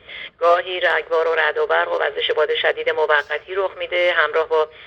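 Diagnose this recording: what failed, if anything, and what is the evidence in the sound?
The fault sits at the sample-rate conversion stage and runs the whole clip: imaging from linear upsampling. The top octave sounds dulled, and a faint metallic shimmer rides on the brightest sounds, with spectral mirror copies filling roughly 11 to 22 kHz at around 40 dB below the signal. That fits a doubling from 22 kHz to 44.1 kHz done by straight-line interpolation, whose weak filtering both rolls off the upper band and leaves images unsuppressed.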